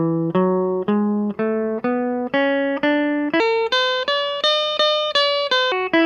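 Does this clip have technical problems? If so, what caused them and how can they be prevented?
Yes. From 3.4 to 5.72 s the music has a wrong sample rate fault: it runs 1.38 times fast and about 5.5 semitones sharp, which fits 32 kHz material played at 44.1 kHz without conversion. On a spectrogram the harmonics jump upward and events bunch closer together in time. Prevent it by resampling to the device rate or setting playback to the file's true rate.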